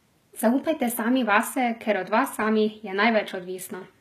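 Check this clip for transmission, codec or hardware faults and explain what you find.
There is one codec fault. HE-AAC compression is heard throughout. The treble is likely rebuilt from copied lower bands, fitting a low bitrate near 20 kbps. S sounds turn gritty and lispy, and nothing remains above 14.9 kHz.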